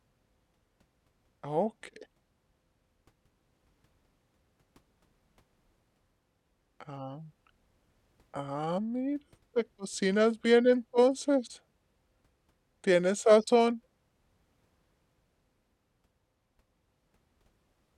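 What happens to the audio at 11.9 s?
At 11.9 s, as throughout the clip, the speech sounds slow and about 5.5 semitones low, running at 0.726 times normal speed: a wrong sample rate, which fits 44.1 kHz audio being played at 32 kHz.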